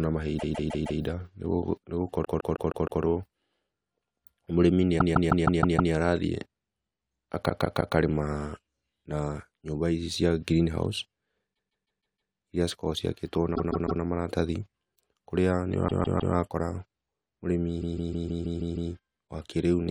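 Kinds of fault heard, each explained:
Repeated frames: at 0.38, 2.24, 4.98, 7.49, 11.53 (just after "cia greenhouse"), 13.55, 15.87 and 17.80 s, the same 157 ms block of compressed speech, which fits a run of six frames, replays three to seven extra times, stuttering.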